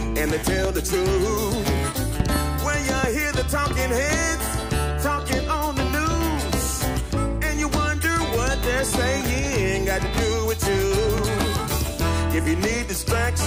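Loud pops strike at 0.65–0.67 s, 2.20–2.38 s (a double), 3.04–3.06 s and 11.18–11.45 s (another double), peaking about 15 dB above the signal. These are likely voltage pulses from a plug, switch or static, and the sound carries on underneath rather than dropping out.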